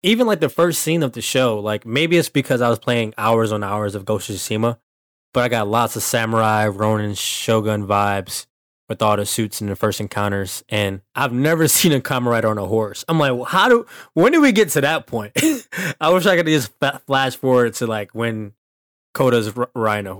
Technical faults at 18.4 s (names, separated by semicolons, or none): hard clipping